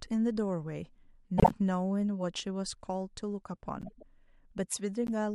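Speech with corrupt frames decoded at 1.38–1.52 s, 3.81–4.03 s and 5.07–5.09 s. Damaged compressed frames were played anyway, giving squeaky bursts as energy lands at wrong frequencies. The spectrogram shows short misplaced streaks, the first one loud, the later two much fainter.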